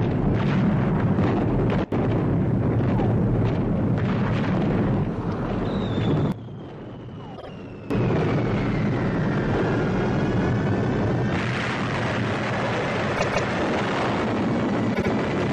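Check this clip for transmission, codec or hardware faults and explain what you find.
Two kinds of fault are present: sudden gain jumps and repeated frames.

Sudden gain jumps at 1.84 to 1.92 s and at 6.32 to 7.90 s are likely caused by a digital gain setting applied without any ramp, switching from one sample to the next. The level drops by about 19 dB in the first case and about 14 dB in the second, then snaps back. The sound and its background noise fall and return together, with abrupt edges at each step.

Repeated frames occur at 7.36 to 7.49 s, 13.15 to 13.47 s, and 14.93 to 15.09 s. In each, a run of compressed frames was sent or written again, so the decoder replays the same stretch. The repeated blocks last 52.2 ms, 156.7 ms and 78.4 ms, and each is played two extra times. That adds 104.5 ms, 313.5 ms and 156.7 ms to the running time. Each one is heard as a stutter.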